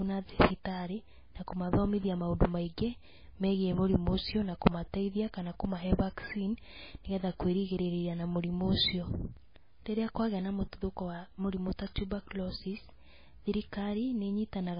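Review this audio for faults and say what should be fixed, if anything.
The speech carries heavy MP3 compression from start to finish. Nothing is present above 5 kHz, so the top end is cut off. The sound is watery and swirly. S sounds chirp with a metallic edge, and attacks are smeared. The likely cause is an encoder starved of bits, which fits a very low bitrate of around 18 kbps. It drops weak frequency lines that flicker on and off between frames. Encode at a much higher bitrate, or keep a lossless master.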